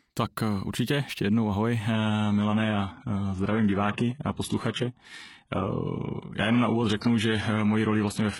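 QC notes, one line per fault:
1.93 s to end: adaptive stream at a lower bitrate; sudden gapless quality drop, nothing above 11.5 kHz, heavier codec artefacts, consistent with a switch to a 12 kbit/s HE-AAC rendition.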